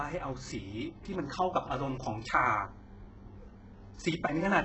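From start to finish the speech carries the signature of HE-AAC compression, most likely at a very low bitrate. Nothing reaches above 8 kHz, and the treble below that cut-off is rebuilt rather than kept. Copied lower bands, shaped only coarsely, stand in for the real top end, so s sounds come out gritty, metallic and lispy. A plain low-pass filter would simply sound dull, but here the highs stay bright while failing to match the harmonics beneath them.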